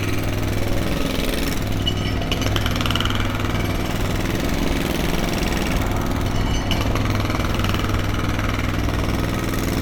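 Sounds, with no technical faults to report.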